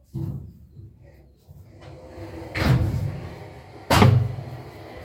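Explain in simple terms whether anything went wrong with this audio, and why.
Listening through the recording, nothing stood out as having gone wrong with the sound at any point.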